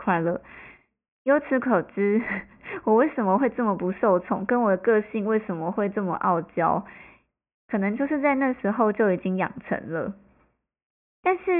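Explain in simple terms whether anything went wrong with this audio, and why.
Nothing went wrong: no dropouts, clicks, distortion or glitches can be heard anywhere in the speech recording.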